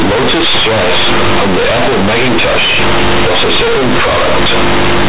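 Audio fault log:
throughout, companded audio read as linear: the speech sounds very loud and harshly buzzy, with heavy noise in the pauses. The mu-law telephone bytes are played as plain linear 8-bit samples without expansion, so quiet passages swing as wide as loud ones, bending the waveform.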